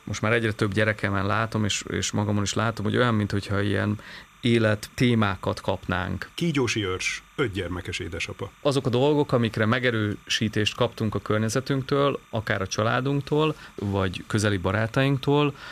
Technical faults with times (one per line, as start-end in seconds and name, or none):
0.00-15.71 timecode bleed